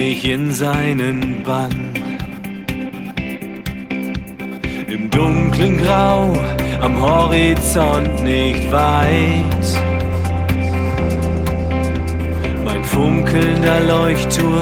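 Nothing goes wrong anywhere in this audio, so there are no technical faults to point out.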